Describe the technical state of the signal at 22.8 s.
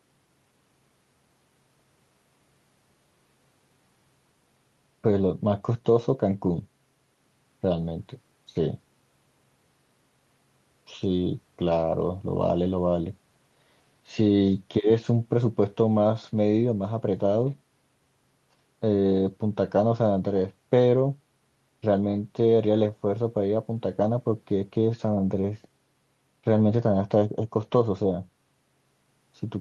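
At 22.8 s the signal is intact, with nothing there beyond the ordinary coding of the call path it passed through.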